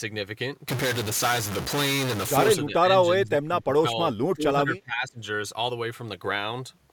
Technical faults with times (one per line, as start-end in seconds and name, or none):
2.66-2.91 speech suppressed in double talk
3.23-4.00 speech suppressed in double talk
4.33-5.20 speech suppressed in double talk